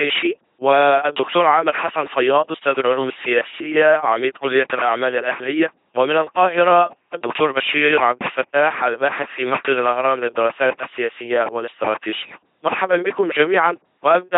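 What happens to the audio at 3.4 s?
At 3.4 s the speech is going through an LPC-10 vocoder, which affects the whole clip. Each moment is rebuilt from a short all-pole filter excited by either a pulse train or noise. The result is a buzzing, mechanical robot voice. Nothing is left above 3.8 kHz. The heavy damage fits a very low-rate codec around 2.4 kbit/s.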